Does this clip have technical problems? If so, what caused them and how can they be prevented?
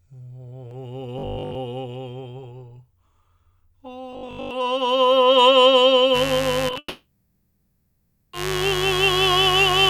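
Yes. The most likely cause of the robotic sound from repeated short buffers is audio arriving too seldom, so the playback software looped its last block in place of most of the real music. At 1.19 to 1.55 s and 4.13 to 4.51 s, this imposes a rigid, metallic 50 Hz buzz, which fits a 20 ms buffer. Larger playback buffers or steadier audio delivery prevent it.

Mains buzz starts at 6.12 s and runs to the end. Sharp switching spikes from the power supply leak into the signal path and add harmonics of 50 Hz at a level around 10 dB below the music, heard as a steady, raspy buzz. Proper grounding, shielded cabling and keeping dimmers and rectifiers away from the audio chain prevent it.

Short concealed packet loss occurs at 6.69, 6.71 and 6.74 s. Each time, 10 ms of audio missed the decoder, and the receiver extended the preceding sound to cover the hole before blending back. This produces brief smears or wobbles in quick succession. 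Forward error correction or a deeper jitter buffer prevents it.

A long network dropout, likely caused by the stream stalling entirely, follows from 6.78 to 8.34 s. About 1.55 s of music is lost. The receiver stretched the last sound into a fading buzz or hiss, and the final 0.55 s or so is silence before the music resumes further on. A more reliable network path prevents it.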